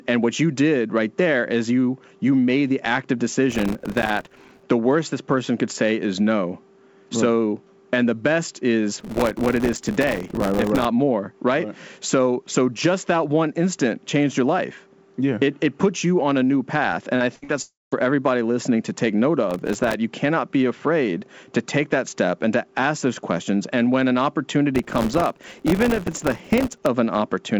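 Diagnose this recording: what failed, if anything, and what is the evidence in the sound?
Processor overload crackle, driver/buffer stage: gritty bursts at 3.50–4.63, 9.00–10.85, 19.51–19.94 and 24.75–26.86 s. Tiny buffers, around 1.5 ms, missed their deadlines and were filled with silence. On the waveform these show as dense notch-like dropouts, and on the spectrogram as broadband vertical speckle.

Short concealed packet loss, network stage: brief smears at 17.16 and 17.44 s. About 40 ms never arrived and was synthesised from the preceding sound, which appears as a blurred patch in the spectrogram's G.722 band below 8 kHz.

Burst of packet loss, network stage: 17.36–17.44 s. About 60 ms was missing, and the receiver's continuation fades, visible as a smooth decaying tail in the waveform.

Long network dropout: 17.62–17.94 s, most likely a network outage. About 300 ms was lost. A fading continuation gives way to roughly 200 ms of flat silence, seen as a blank spectrogram gap before the audio resumes further on.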